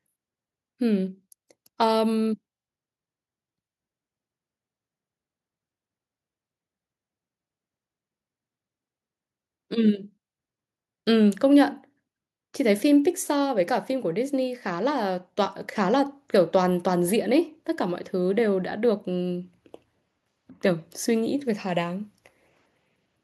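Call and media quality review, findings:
Nothing stood out on listening to the speech in this recording.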